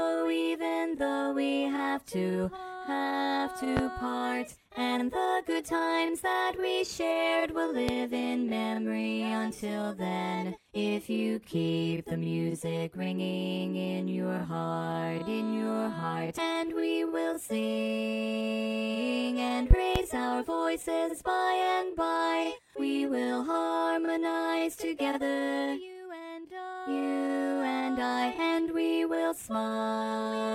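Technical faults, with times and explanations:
3.77–3.81 s, 7.89–7.92 s, 19.71–19.99 s: loud pop, a sharp thump far above the sound, doubled at 19.7 s, likely a voltage spike from a plug or switch.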